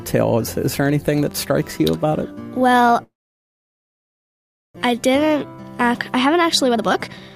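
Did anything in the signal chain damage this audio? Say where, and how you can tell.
Yes. From 3.03 to 4.79 s there's a long network dropout, likely a network stall. The last sound smears into a fading buzz, then about 1.65 s of near-silence. When audio resumes, roughly a second is simply gone, and it comes back noticeably later than before.

Right after that, the receiver's jitter buffer speeds up to shed that extra delay. At 5.32 to 5.64 s it runs at 110%, then at 6.17 to 7.30 s at 134%, trimming around 0.4 s. Pitch stays put while the timing feels rushed, because pitch-period-sized chunks are being cut out.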